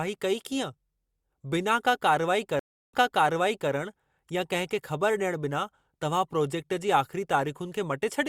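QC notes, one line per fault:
2.59–3.71 s, stream reconnect: 0.34 s dropout, then playback resumes 0.78 s earlier as the server resends buffered audio to a fresh decoder, which fades in.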